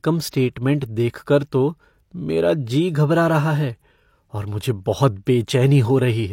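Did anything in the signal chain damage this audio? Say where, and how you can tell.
Yes. The damage happened at the codec stage, as pre-echo. A transform codec spread its quantisation noise evenly across a block, and a sharp onset in the speech sat late in that block. Noise scaled for the loud attack spilled into the quiet moment just before it. You can hear a short hiss from about 0.29 s to 0.33 s, roughly 43 ms, leading into that onset, which sounds softened and smeared instead of crisp.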